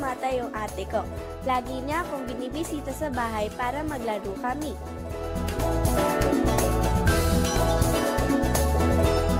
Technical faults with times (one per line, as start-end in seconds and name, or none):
none